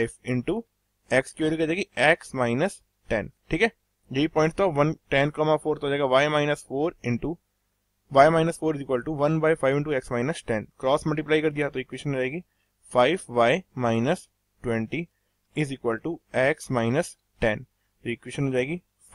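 At 9.72 s and again at 11.94 s there is a single sharp click, each most likely from dropped samples. Probably only a couple of samples, a small fraction of a millisecond, went missing, so the waveform steps abruptly from one value to a later one with nothing audibly lost. On a waveform each shows as a tiny discontinuity. On a spectrogram each appears as a thin vertical line running across the frequency range.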